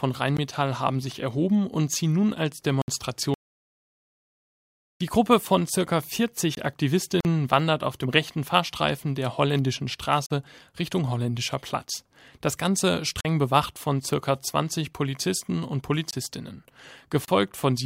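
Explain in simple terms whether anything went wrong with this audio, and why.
Several things went wrong, and each leaves a short stretch of silence in the speech.

The first problem is a block of digital silence, which happens six times. The program producing the audio most likely failed to fill its output buffer in time, so a chunk of samples came out as silence. You hear a tick at 0.37 s, and small holes at 2.82 to 2.88 s, 6.55 to 6.57 s, 10.26 to 10.30 s, 13.21 to 13.25 s and 16.11 to 16.13 s. Most last about 20 or 40 milliseconds, which fits missed buffers of 1024 or 2048 samples. The sound switches off and on with no fade.

The second problem is an audio dropout to silence, from 3.34 to 5.00 s. The sound cuts out in mid-flow for about 1.7 seconds, and even the faint background hiss of the room disappears. That complete silence shows the recorder kept running and writing silence after it stopped receiving any input. 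The likely cause is a brief disconnection or an accidental mute. Whatever was said during those seconds is lost.

The third problem is a gap at a join of encoded pieces, which appears twice, ten seconds apart. The audio was compressed in separate chunks of about 10 seconds each and then stitched together. Nobody trimmed the bit of padding silence the compressor adds at the start and end of each chunk. The result is a 45-millisecond hole at 7.20 to 7.25 s and a 31-millisecond hole at 17.25 to 17.28 s. After each hole, the speech continues from exactly where it stopped.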